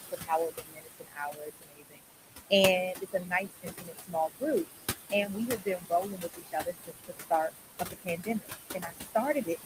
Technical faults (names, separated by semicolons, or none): noise suppressor artifacts; speech cut by the noise suppressor